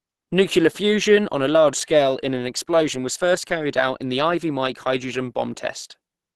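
A speech clip with plainly audible Opus compression throughout. Nothing is present above about 12.1 kHz, and the sound has the muffled, hoarse quality of Opus's hybrid speech mode, where the low band is modelled as speech and only a coarse layer covers the upper band. This is the likely cause, and the degree of damage fits a low bitrate of around 16 kbps.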